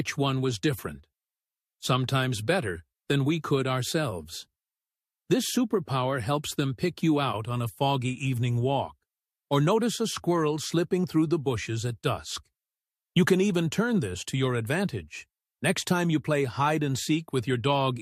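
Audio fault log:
No faults detected.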